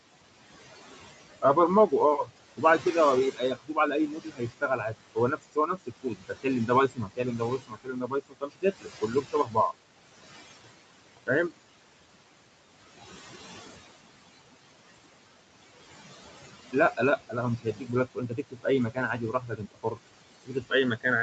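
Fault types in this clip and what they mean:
Noise suppressor artifacts: The suppressor lowers steady room noise by about 20 dB frame by frame, so the background sinks between phrases and rises under speech.
Speech cut by the noise suppressor: Parts of the speech are treated as noise and drop by up to about 22 dB. They sound swallowed, worst from 3.32 to 9.57 s.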